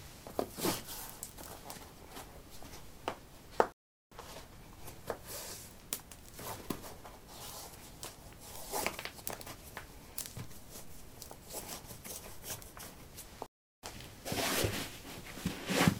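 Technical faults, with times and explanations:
3.72–4.12 s and 13.46–13.83 s, playback stall: the sound stops dead for 0.39 s, then 0.37 s, before resuming. The player likely ran short of data.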